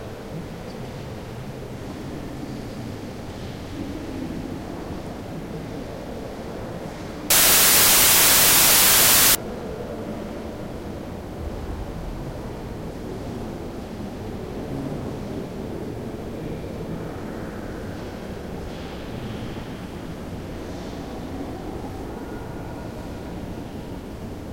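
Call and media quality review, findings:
Samples built from the wrong bytes, 7.30–9.35 s. Symptom: sudden loud, harsh broadband noise replacing the audio for about 2 s, then clean recovery. Probable component: PCM reader or decoder sample assembly. Mechanism: byte offset, swapped byte order or wrong alignment, so low-order bits land in the high-order position.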